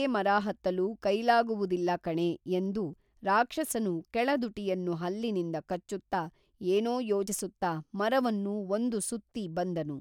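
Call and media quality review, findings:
Dropped buffer (overrun) at 2.93 s, between "ಮರಹತ್ತಲು ಕೈಲಾಗುವುದಿಲ್ಲಕಣೇ ಎಂದು" and "ರಾಕ್ಷಸನು ಕೇಳದುಟಿಯನ್ನು ಹಲ್ಲಿನಿಂದ", at 6.13 s after "ಎಂದು ರಾಕ್ಷಸನು ಕೇಳದುಟಿಯನ್ನು ಹಲ್ಲಿನಿಂದ", and at 7.28 s. Forward skip with no gap, losing around 10 ms twice and around 30 ms once. Likely capture-side read falling behind, so hardware overwrote unread samples.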